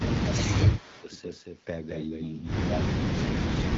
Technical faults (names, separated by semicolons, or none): doubled audio track; speech suppressed in double talk; echo leak